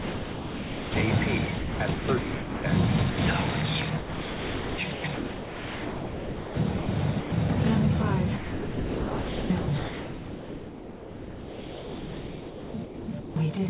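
Right from the start, 0 to 0.96 s, the sound is dropped by the voice detector: it's replaced by steady comfort noise, likely because the sender's detector judged the opening as background and stopped sending. Then 1.46 to 2.64 s is likely chopped by the voice detector, with about 0.82 s of that stretch swapped for comfort noise. The sound cuts in and out there. There are two short dropouts of the same kind, at 3.10 to 3.18 s and at 7.20 to 7.32 s, each a brief gap of fill, 80 ms and 120 ms. There are also two longer chopped stretches, likely from the same detector. From 3.98 to 6.88 s about 2.4 s is replaced, and from 8.36 to 13.36 s about 4.6 s of the 5 s is filled, so that last part is mostly synthetic hiss with fragments of sound breaking through. Throughout, nothing is heard above 4 kHz, which fits a 64 kbps G.711 mu-law call path.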